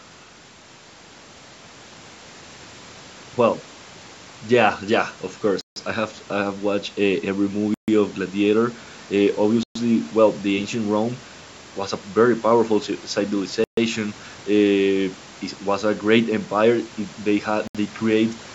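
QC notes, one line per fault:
5.61–5.76 s, 7.74–7.88 s, 9.63–9.76 s, 13.64–13.77 s, 17.67–17.75 s, Bluetooth stall: the speech drops to silence for 151, 137, 122, 134 and 72 ms, then resumes. This is likely a Bluetooth stall, where held-up packets let the headphones' buffer run dry until the resent audio arrived.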